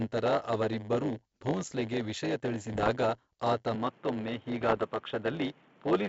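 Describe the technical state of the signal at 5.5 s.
At 5.5 s the speech carries a block size mismatch (padded), present across the whole clip. Each block is topped up with zeros, leaving a tiny gap 100 times a second. That produces a steady 100 Hz buzz and a delivery about 8% slow at normal pitch. A waveform shows regular dropouts every 10 ms, and a spectrogram shows evenly spaced vertical notches.

The moment also falls inside a stretch from 3.75 s to the end where the sound is band-limited, dull and boxy, with a faint new background noise. The likely cause is an input switched to a poorer device. The switch at 3.75 s has no silence and no level jump. On a spectrogram the upper energy stops abruptly at that line, with a thin noise floor filling the gaps below.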